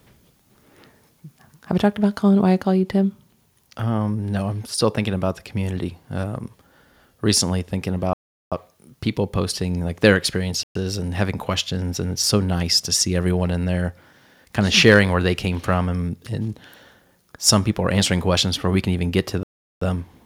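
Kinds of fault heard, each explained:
Block size mismatch (truncated): a 43.1 Hz buzz runs throughout, fitting 1024-sample blocks whose ends are discarded, while the speech pace stays essentially unchanged.
Bluetooth stall: speech drops to silence for 385 ms after "recently thinking", 121 ms after "people posting like their", and 384 ms near 19.4 s, likely from interrupted wireless delivery.
Microphone overload: at 14.87 s, just before "where they came from", peaks exceed the limit by about 2 dB, flattening roughly one percent of samples into a harsh crackle, likely from excessive input gain.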